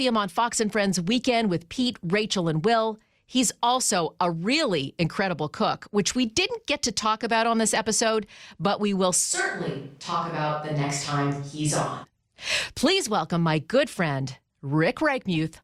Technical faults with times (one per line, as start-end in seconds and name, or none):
9.35-12.03 switch to a distant microphone